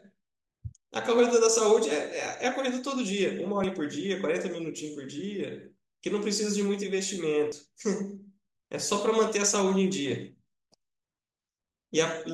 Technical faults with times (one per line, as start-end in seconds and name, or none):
3.64 dropped buffer (overrun)
7.52 dropped buffer (overrun)